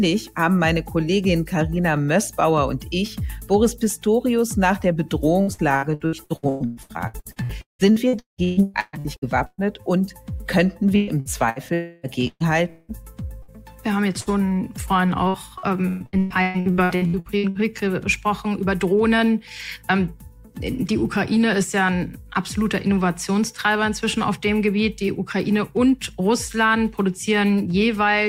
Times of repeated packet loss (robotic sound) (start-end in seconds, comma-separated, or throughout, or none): 5.41-9.61, 10.96-17.73